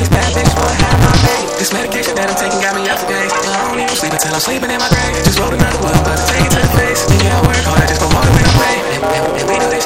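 From the start to the end of the clip there is a block size mismatch (truncated). The stage feeding the audio writes longer blocks than the next stage reads, so the tail of every block is discarded. This produces a steady buzz at 172 Hz, the rate at which blocks are cut off, which fits a 256-sample read block. With part of each block missing, the sound plays back about 1.88 times faster than normal while staying at roughly its original pitch.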